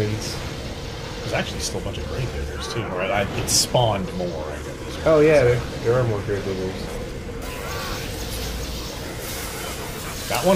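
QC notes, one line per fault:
7.42–10.55 s: pre-emphasis left on. From 7.42 s to the end the treble climbs steeply, about 14 dB higher at 10 kHz than at 1 kHz. This follows a 75 µs FM boost whose matching de-emphasis was never applied, leaving the sound thin, bright and sibilant.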